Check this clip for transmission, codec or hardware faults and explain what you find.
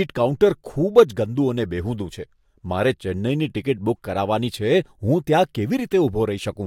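I found no faults to explain in this clip.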